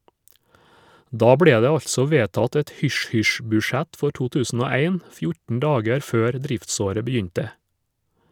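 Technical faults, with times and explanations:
No technical faults can be heard in this speech clip.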